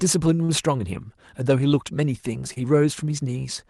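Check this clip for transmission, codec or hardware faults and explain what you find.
Three short stalls from late packets occur in this speech, at 0.35, 0.44 and 2.53 s. Each time, a packet missed its playout slot and the jitter buffer ran dry, so the receiver stretched the last sound for about 30, 42 and 27 ms respectively until the packet arrived. Playback then resumed from the same point, so nothing is lost, but each stall leaves a held sound with a slight buzz or dip, and the delay grows by the length of the stall. The coding noise and the high-frequency roll-off near 12 kHz point to the call codec, which fits Opus at about 32 kbps.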